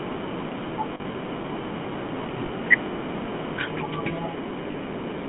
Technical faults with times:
0.00-5.29 GSM full-rate codec
0.94-1.15 lost GSM frames
2.46-2.50 lost GSM frames
4.72-4.75 lost GSM frames

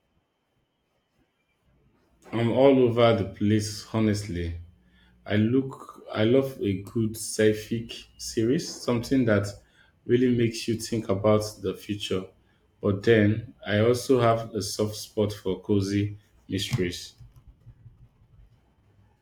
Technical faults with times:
3.61-5.56 mains hum

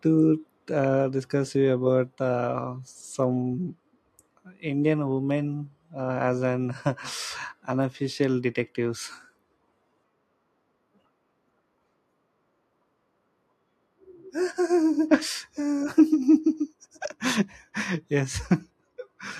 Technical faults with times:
1.02 microphone volume stepped down

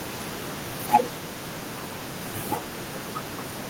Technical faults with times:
0.94-0.97 microphone overload
0.96 microphone volume stepped down

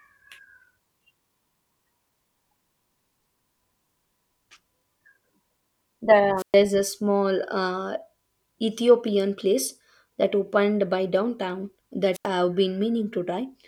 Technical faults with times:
6.37-6.55 wireless microphone squelch dropout
12.13-12.27 wireless microphone squelch dropout

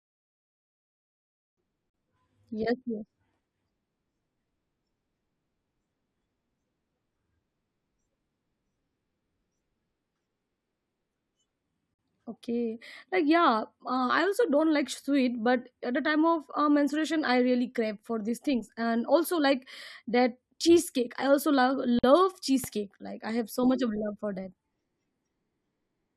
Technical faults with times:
1.90-1.94 gap at a join of encoded pieces
11.94-11.99 gap at a join of encoded pieces
21.99-22.04 gap at a join of encoded pieces
22.64-22.66 loud pop

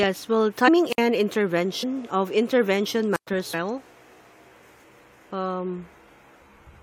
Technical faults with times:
0.67 compressed frames skipped
0.85-1.02 wireless microphone squelch dropout
1.82 compressed frames skipped
3.12-3.27 wireless microphone squelch dropout
3.53 compressed frames skipped
4.83 compressed frames skipped

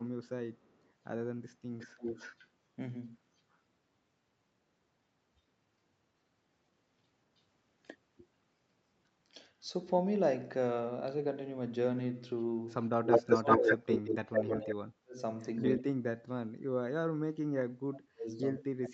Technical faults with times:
0.25-0.92 echo leak
1.78-2.48 echo leak
3.52-3.57 echo leak
7.37-7.42 echo leak
13.06-18.94 speech suppressed in double talk
13.11-14.70 echo leak
15.58-15.63 echo leak

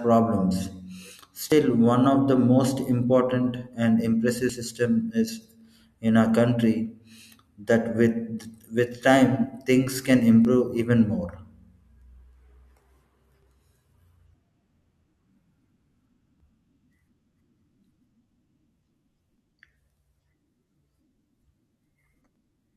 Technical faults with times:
1.52 audio missing between chunks
4.49 audio missing between chunks
7.47 audio missing between chunks
10.45 audio missing between chunks
13.43 audio missing between chunks
16.40 audio missing between chunks
19.38 audio missing between chunks
22.36 audio missing between chunks

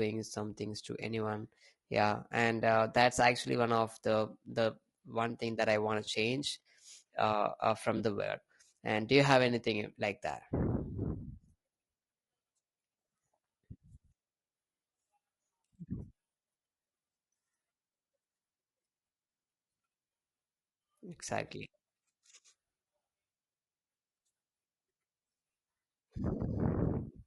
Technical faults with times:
0.00-27.27 low-delay AAC compression
6.05-6.08 AAC frame loss with concealment
7.97-8.00 AAC frame loss with concealment
26.83-26.86 AAC frame loss with concealment

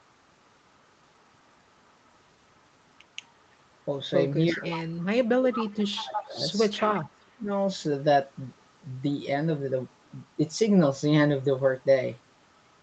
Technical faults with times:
4.52-4.71 speech suppressed in double talk
4.70-5.05 echo leak
5.40-6.38 speech suppressed in double talk
5.80-6.26 echo leak
6.73-6.86 echo leak
6.94-7.50 speech suppressed in double talk
8.57-8.64 echo leak

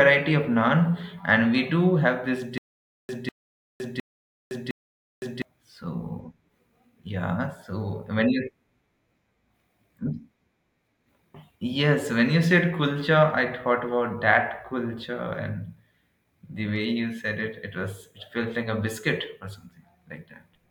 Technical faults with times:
2.58-5.42 stutter with silent gaps

